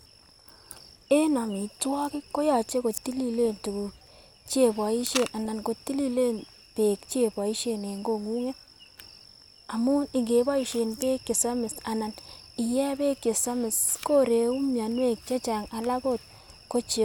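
DAB burbling hits at 3.45–3.70 s, 5.45–5.64 s just before "kotililen beek cheiboishen", and 10.63–10.92 s. Weak-reception bit errors get past error correction and jolt sub-band levels, giving short burbling blips.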